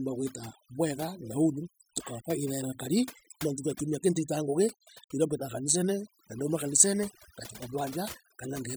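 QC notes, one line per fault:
Throughout: overdone noise removal. The noise reduction was set too aggressively, so frequency bands sitting near its noise estimate are pulled far down or cut entirely, taking low-level parts of the speech with them. The background drops and breaks up into twinkling specks.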